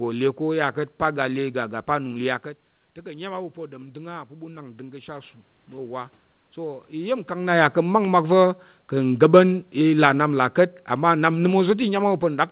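Around 2.5 s the talker drops back, and from 3.02 to 7.24 s the automatic gain rises about 8 dB to compensate, so voice and room noise swell up together. Then from 9.11 s to 12.51 s the automatic gain falls about 4 dB, and the voice sinks gradually, with the background going down right along with it.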